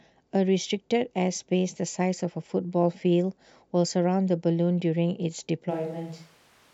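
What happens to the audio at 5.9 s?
A switch to a distant microphone starts at 5.72 s and lasts to the end: the speech turns abruptly roomy and thin, about 5 dB quieter, with more background noise, likely because a farther microphone replaced the close one.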